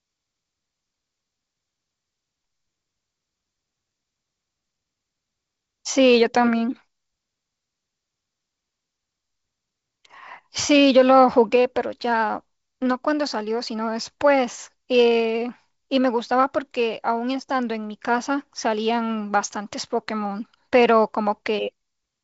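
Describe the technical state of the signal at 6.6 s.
At 6.6 s the speech is intact, with no fault present, only the ordinary light hiss and 7.7 kHz ceiling of G.722 wideband telephone coding running as intended.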